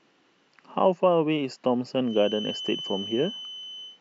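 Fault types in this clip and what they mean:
Feedback whistle: a loudspeaker-to-microphone loop likely hovers at the edge of feedback, sustaining a thin 3 kHz whistle well below the speech from 2.01 s.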